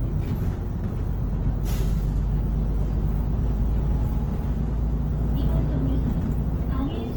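Heavy Opus compression is the likely culprit throughout this sound recording, with the encoder in its music (CELT) mode at a rate consistent with about 16 kbps. Band-filling leaves tones grainy, rough and noisy, while content still reaches about 20.4 kHz.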